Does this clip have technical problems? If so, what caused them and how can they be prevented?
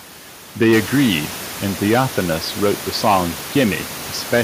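No, there's nothing technically wrong with this speech clip, and the background noise in the room, which comes up by about 10 dB around half a second in and then sits about 15 dB below the speech, is simply part of the recording.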